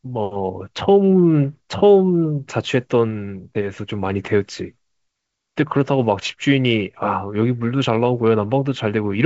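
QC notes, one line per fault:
Nothing to flag here, it's just the usual G.722 wideband telephone coding at 56 kbit/s, with the top end stopping around 7.7 kHz and a light coding texture that's normal for that path.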